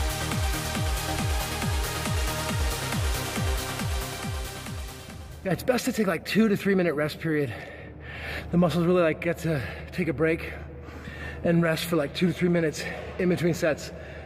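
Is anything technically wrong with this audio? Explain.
No, there's nothing technically wrong here that I can hear, so you're good on that front.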